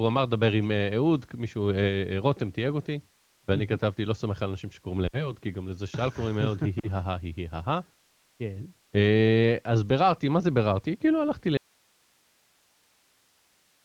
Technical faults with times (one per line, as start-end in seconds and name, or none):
5.07-5.35 lost AMR speech frames
6.80-6.87 lost AMR speech frames
11.57-13.85 audio dropout to a faint residue